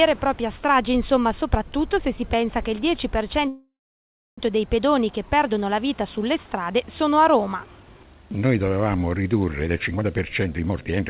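At 3.48 s the audio stalls until 4.40 s, most likely a call audio freeze from packets held up in transit that drained the jitter buffer. A short fading buzz or hiss carries on the last sound, then about 670 ms of silence. Unlike a dropout, it resumes exactly where it stopped, so nothing is lost, only about 0.9 s of added delay.

From 9.67 s to 11.03 s a jitter buffer speed-up plays the sound at roughly 128% speed, shedding around 0.4 s through many tiny pitch-period cuts. The pitch stays unchanged, which separates it from a resampling speed-up. Throughout, the narrowband call codec leaves nothing above 4 kHz.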